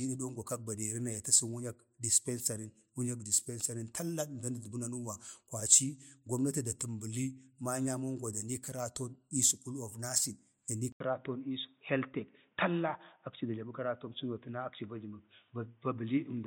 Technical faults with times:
10.92-16.47 input switched to a poorer device

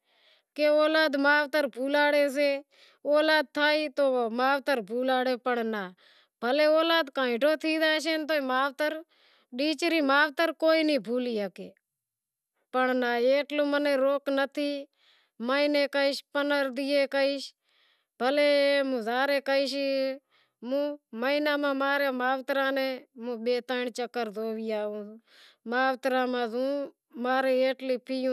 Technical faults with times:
none

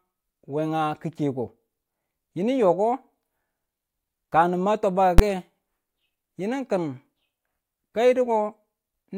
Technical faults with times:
5.18 invalid numbers at full scale

